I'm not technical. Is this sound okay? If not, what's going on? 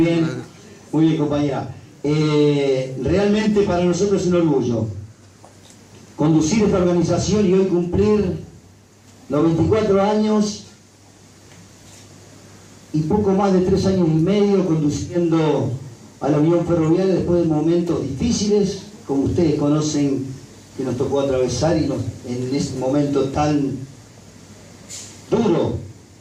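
Yes, nothing wrong turns up on listening; no dropouts, distortion, glitches or level problems anywhere in the audio.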